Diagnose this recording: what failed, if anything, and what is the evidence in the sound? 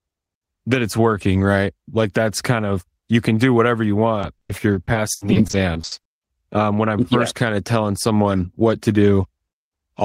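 Network stage: repeated packet loss (robotic sound) from 4.21 to 6.07 s, just after "can do whatever you". Fifteen gaps, the longest 80 ms, were filled by extending the previous audio, about 480 ms in total or a quarter of the span. The result is choppy, with pieces missing. On a spectrogram the concealed patches show as flat, smeared repeats of the preceding harmonics, and the waveform shows looped, periodic stretches.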